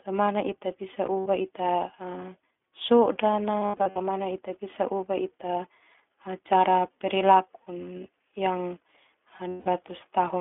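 The speech has gone through the iLBC codec, which codes each frame on its own at a low rate. The damage is consistent with its 15.2 kbps mode and 20 ms frames. Only 250 Hz to 3.4 kHz passes, and the voice sounds plainly rough and synthetic.

Lost iLBC frames occur at 1.20–1.28 s, 3.60–4.02 s and 9.48–9.68 s. In each, packets were dropped and the decoder bridged the gap by repeating the last pitch cycle mixed with noise. The first loss lasts 60 ms. The second totals 260 ms scattered over 400 ms, with runs of about 70 ms at most. The third lasts 180 ms. Each gap sounds like a held, slightly buzzy vowel, and the voice comes back almost immediately.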